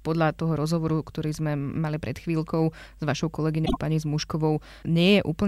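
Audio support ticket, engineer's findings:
Frames out of order, 3.65–3.77 s: two adjacent frame runs swapped, likely in packet reordering before the decoder. Speech stretch plays halves exchanged, brief garbled flutter; 26.1 ms blocks.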